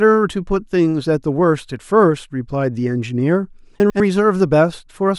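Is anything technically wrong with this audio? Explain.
Yes. From 3.8 to 4.0 s, chunks out of order: a 100 ms chunk arrives one chunk late, jumbling the speech across three hard joins, yet nothing drops out, unlike a dropout.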